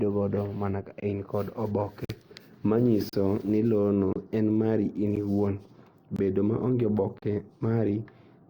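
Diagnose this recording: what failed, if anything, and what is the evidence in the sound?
Gaps between stream segments at 1.00–1.03, 2.05–2.09, 3.09–3.13, 4.13–4.16, 5.16, 6.16–6.19 and 7.19–7.22 s, at the streaming playback stage. Hard-edged silences of 10 to 48 ms recur about once per second, which fits 1 s segments whose timestamps leave holes. The player fills them with silence, and no speech is lost.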